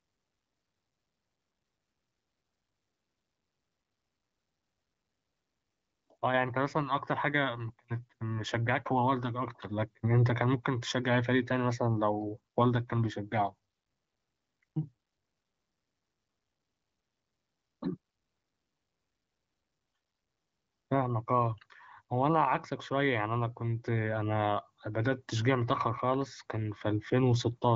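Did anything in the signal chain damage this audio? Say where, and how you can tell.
No, nothing damaged this audio.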